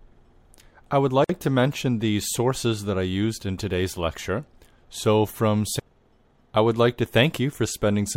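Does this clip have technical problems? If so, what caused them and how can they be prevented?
Yes. The speech was encoded in separate pieces and joined without trimming the encoder delay and end padding. This left a gap at a join of encoded pieces: a 51 ms silence from 1.24 to 1.29 s, between "I would" and "to mention the sources." Encoding in one pass, or trimming the delay and padding at each join, prevents it.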